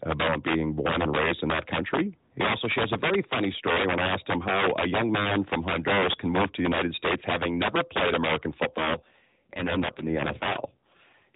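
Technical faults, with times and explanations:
Throughout, integer overflow: the signal is driven about 7 dB past the integer limit, so loud peaks wrap to the opposite sign instead of being held at full scale. A small share of samples, a few percent, flip across the range, giving sharp, violent cracks on louder speech that are harsher than clipping.
8.66 to 11.35 s, AMR rate drop: the AMR-NB codec, running at 12.2 kbps with only light damage before this point and nothing above 4 kHz, is switched down to 5.9 kbps for the rest of the clip. With fewer bits for the vocal-tract model and its pulses, the speech turns buzzier and more synthetic, with no gap and no change in bandwidth.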